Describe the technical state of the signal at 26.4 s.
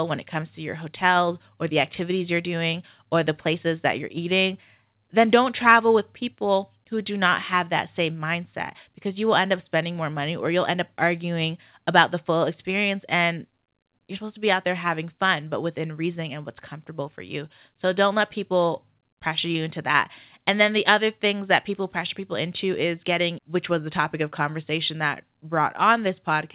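At 26.4 s the speech is intact, carried through the G.711 call path with its usual narrow telephone bandwidth, nothing above 4 kHz, and no fault present at that moment.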